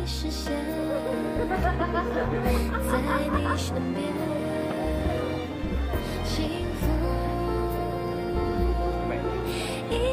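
A brief glitch at 3.35 to 3.40 s comes from damaged data in a compressed stream: corrupted frames forced the decoder to lose sync and resynchronise.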